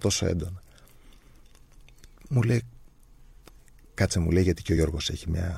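A speech clip with compressed frames skipped at 4.76 s, where roughly 50 ms of audio is lost, seen as a narrow discontinuity in the waveform and spectrogram.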